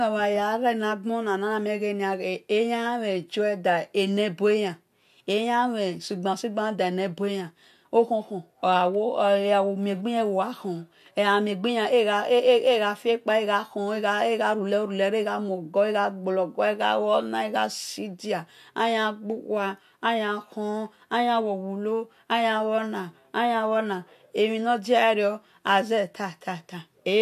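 Listening to the speech recording, nothing stood out as a technical fault.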